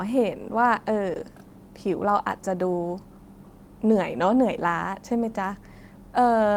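No technical faults are audible.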